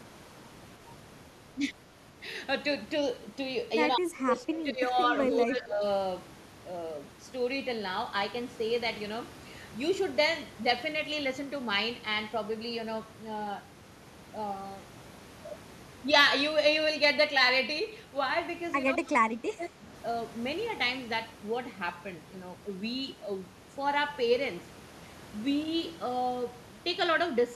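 From 3.96 to 4.91 s, 5.31 to 5.83 s, 18.98 to 19.09 s and 19.36 to 19.86 s, the speech dips by roughly 10 to 25 dB, deepest in the first stretch. That's speech suppressed in double talk, likely an echo canceller ducking the talker while the far end spoke. Around 19.1 s there's a brief echo leak, a faint copy about 25 dB down arriving 214 ms late, likely residual loudspeaker echo the canceller missed.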